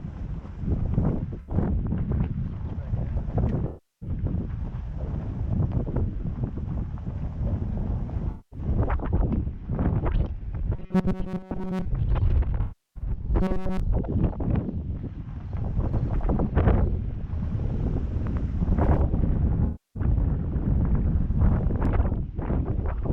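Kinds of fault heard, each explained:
AAC frame loss with concealment: Five gaps occur where the decoder lost audio and patched it from the last good spectrum. They fall at 1.39 s, 3.67 s, 8.31 s, 12.61 s and 19.65 s. The gaps last about 85, 341, 213, 341 and 299 ms. The shortest sounds like a brief smeared, noisy patch. The longer ones lose detail, sound hollow and phasey, and sag in level before the real signal returns.
Robotic sound from repeated short buffers: From 10.76 to 11.86 s, and again from 13.42 to 13.80 s, the sound turns into a rigid, metallic buzz at 188 Hz. That pitch fits a slice of roughly 5.3 ms being replayed over and over. The likely cause is audio arriving too seldom, so playback loops the last short buffer while real audio is skipped. Most of the first stretch is repeated, and all of the second.
Doubled audio track: From 15.93 to 21.85 s, a second copy of the whole sound runs about 100 ms behind the first. 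The copy is roughly as loud as the original. It has no decay or room colour, so it sounds like a flat, stuttering double rather than an echo. It starts and stops abruptly at those points. The likely cause is the same audio being captured twice by paths of different speed.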